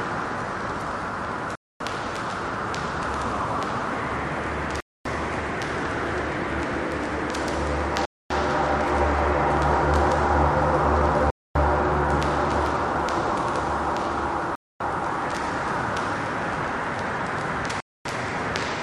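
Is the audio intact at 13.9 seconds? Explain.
Yes, at 13.9 seconds the audio is intact, with no dropout, click, distortion or other fault audible there.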